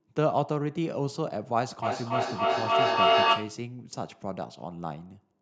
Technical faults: feedback echo between two devices

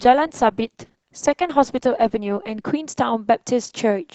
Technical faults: adaptive stream starting at a low bitrate

